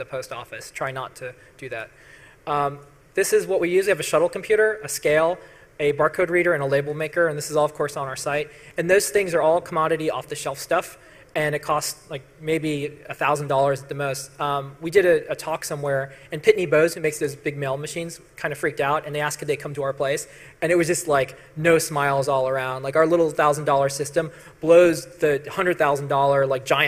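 A brief level drop from 16.93 to 17.04 s, about 0.11 s long, is likely one channel dropping out: the mono-summed audio falls abruptly by about 6 dB rather than to silence, and anything only in the lost side vanishes, unlike a full dropout or gain dip.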